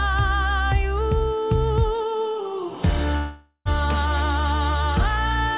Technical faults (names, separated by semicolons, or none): long network dropout